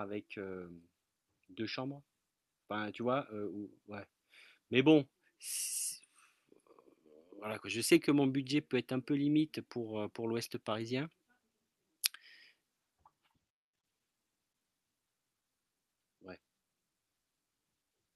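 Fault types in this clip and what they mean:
Nothing stood out on listening to this speech.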